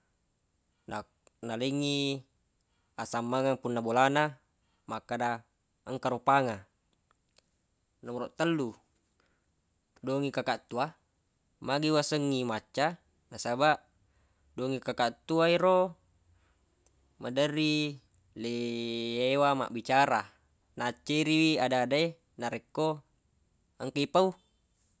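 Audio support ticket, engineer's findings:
No faults found on listening; the speech track shows no audible defects and no component needs attention.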